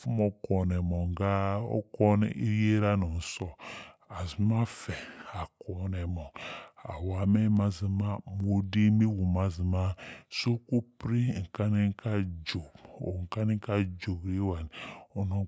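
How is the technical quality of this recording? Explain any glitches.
The recording has one fault, a wrong sample rate, which lasts the whole clip. The speech plays at 0.726 times its proper speed and sits 5.55 semitones low. That fits audio recorded at 22 kHz being played at 16 kHz with no conversion. Speed and pitch fall together by the same ratio, so voices sound slow, deep and drawn out. A pitch shift would lower the pitch without slowing the speech, and a time stretch would slow the speech without lowering the pitch.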